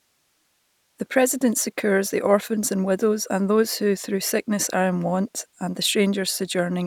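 No technical faults are audible.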